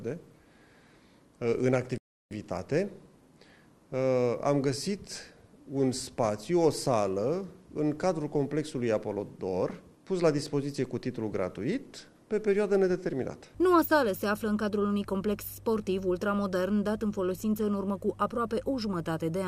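At 1.98 s the sound cuts out abruptly mid-flow and stays silent for about 330 ms, resuming at 2.31 s. This is a playback stall, likely caused by the player running short of data or its output thread being blocked until it recovered.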